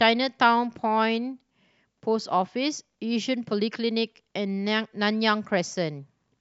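Speech recording with nothing technically wrong in it.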